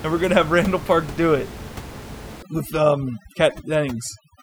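From 2.43 s to the end of the clip, the speech shows overdone noise removal. A noise reducer set far too aggressively cuts individual frequency bands whenever they sit close to its noise estimate. The room noise, about 15 dB below the speech before this point, drops to near silence with twinkling specks, and quiet parts of the voice vanish with it. Unlike a gate, which silences everything at once, this removes bands selectively, which produces the sparkle.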